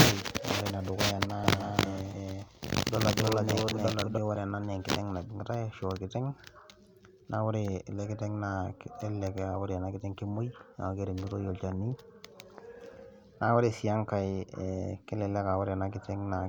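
From 1.44 to 4.18 s a doubled audio track appears: an equally loud, dry copy trails roughly a third of a second behind, likely from a second, slower capture path.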